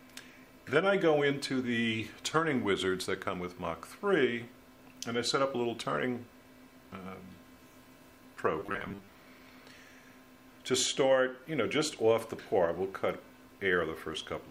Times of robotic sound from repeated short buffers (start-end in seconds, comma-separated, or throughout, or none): 8.59-9.08